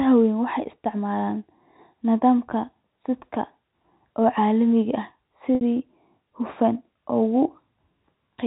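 At 5.55 to 5.61 s, packet loss with pitch repetition bridges about 60 ms of missing audio, which fits two lost 30 ms packets. The last pitch period loops into a slightly held, buzzy tone that fades over roughly 50 ms. On a spectrogram the harmonics run flat and unchanging before dimming, and the waveform shows identical repeating cycles shrinking in amplitude until the normal signal cross-fades back in, still band-limited below 4 kHz by the G.711 telephone coding.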